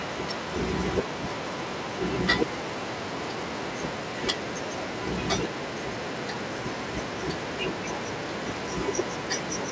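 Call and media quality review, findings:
No findings for call and media quality: the speech comes through what sounds like a G.722 wideband call path, with nothing above 8 kHz as that codec should give.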